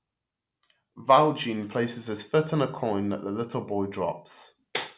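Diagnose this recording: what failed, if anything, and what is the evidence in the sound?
Listening closely to the speech recording, nothing in the sound stood out as a failure at any stage of the chain.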